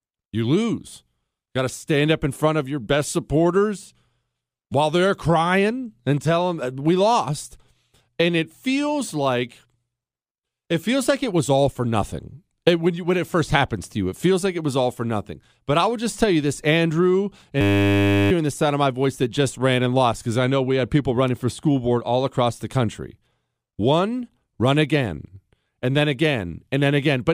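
At 17.61 s the speech freezes into a system hang loop that lasts until 18.31 s, just before "the sound of my". The playback hardware kept recycling one 10 ms stretch of its buffer while the host stalled, repeating it 70 times at 100 Hz. That produces a steady buzz, and around 0.7 s of speech is lost. A waveform shows one identical cycle tiled evenly. A spectrogram shows flat horizontal lines at 100 Hz multiples.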